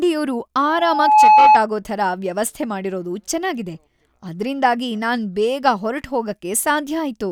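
From 0.65 s to 1.61 s a steady 857 Hz tone swells over about half a second into a squeal roughly 10 dB above the speech. This is loudspeaker feedback squeal: the microphone re-amplifies its own loudspeaker, and at 857 Hz the loop gain exceeds one.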